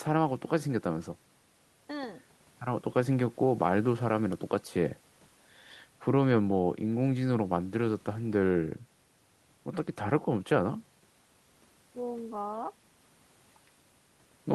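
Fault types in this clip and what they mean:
No system faults in this speech recording; nothing to report.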